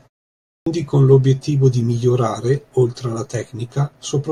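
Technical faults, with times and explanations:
0.57 to 0.66 s, clipped start after a pause: the output seems to doze off during the opening 0.57 s of silence and takes about 94 ms to wake back up, so the first sounds of the speech get swallowed and it jumps in abruptly mid-onset.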